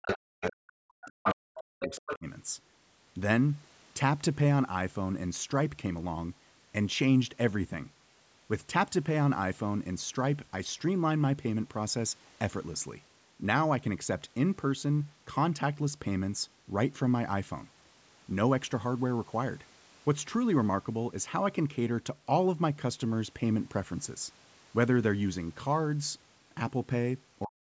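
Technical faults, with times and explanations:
0.00–2.26 s and 27.45–27.62 s, speech suppressed in double talk: level dips by roughly 40 dB in pieces, likely echo canceller ducking during overlap; waveform shows gouged gaps, spectrogram dark vertical holes.
0.02–0.14, 0.44–0.52, 1.06–1.36 and 1.80–2.17 s, other side's voice leaking through: a second voice in short scraps, mostly about 10 dB under the talker but about equal at 1.06 s, likely residual loudspeaker echo; spectrogram shows overlapping harmonic stacks.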